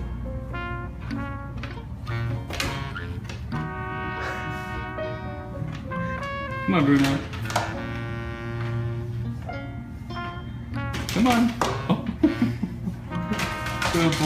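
Nothing in the audio stands out as a technical problem at any point, so there's nothing here to flag.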